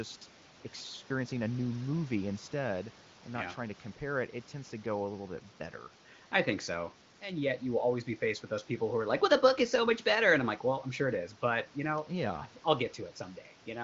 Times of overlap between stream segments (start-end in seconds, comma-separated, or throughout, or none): none